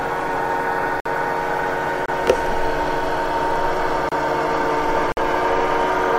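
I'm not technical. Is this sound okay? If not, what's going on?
No, there are four brief dropouts, each a gap between stream segments. The audio arrives in one-second chunks that don't quite line up, so the player fills the hole with silence: at 1.00 s (54 ms), 2.06 s (26 ms), 4.09 s (28 ms) and 5.12 s (51 ms). Nothing is missing, just paused.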